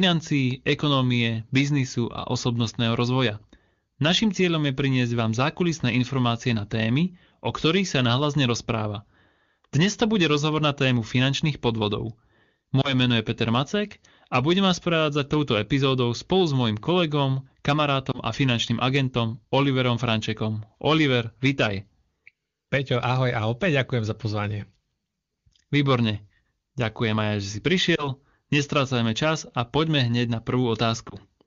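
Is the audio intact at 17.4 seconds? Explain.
Yes, the audio is intact at 17.4 seconds, with no fault at that moment.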